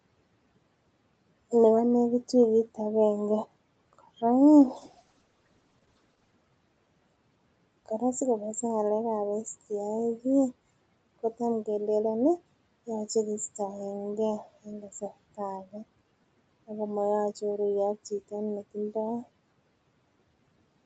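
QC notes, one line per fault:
4.61–6.39 s, call bitrate drop: the sound turns rough and watery for about 1.7 s, consistent with the bandwidth estimate collapsing and the Opus encoder falling from around 48 kbps to roughly 11 kbps, quantising coarsely before the bitrate recovers.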